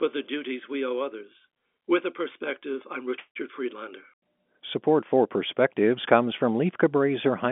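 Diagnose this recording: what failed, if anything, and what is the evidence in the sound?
Nothing failed in this recording.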